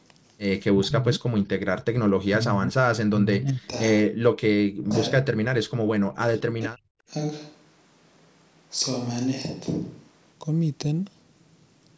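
At 0.67–1.23, 1.91–1.95, 2.27–3.61, 4.06–4.13, 4.67–4.94, 5.22–5.35 and 5.91–6.91 s the speech sinks by roughly 20 to 40 dB, likely speech suppressed in double talk. Unlike packet-loss gaps, these dips vary in depth and length.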